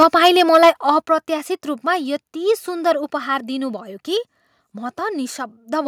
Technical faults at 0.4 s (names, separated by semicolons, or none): microphone overload